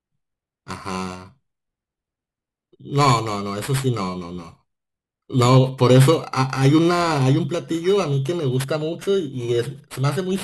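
Speech, affected for its whole length by periodic clock jitter. The converter's sample clock is being pushed back and forth at a steady rate of around 3 kHz, so every component of the voice acquires a pair of sidebands spaced roughly 3 kHz above and below it. Sibilants and upper harmonics suffer most, which gives the speech a rough, metallic edge that rides on the sound and drops out entirely in the pauses.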